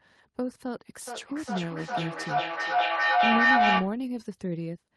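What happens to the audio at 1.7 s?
At 1.7 s the sound is inside a feedback echo between two devices, running from 1.07 to 4.01 s. One device replays what the other's microphone sent, and that microphone picks it up again, so each sound returns roughly every 0.4 s, thinner and ringing. The repeats build to about 8 dB above the speech. On a spectrogram this appears as evenly spaced, stacked copies of each syllable. The waveform shows a rising, smeared envelope instead of gaps.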